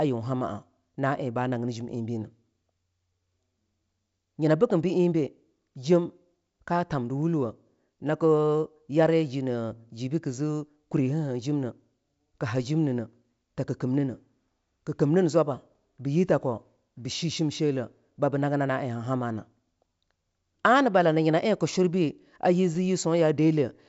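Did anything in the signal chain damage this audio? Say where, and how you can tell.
No, nothing in the signal chain stood out as damaging on listening; the speech is band-limited to roughly 7.7 kHz, as expected from a G.722 wideband telephone path that sounds like it is running at its full 64 kbit/s rate.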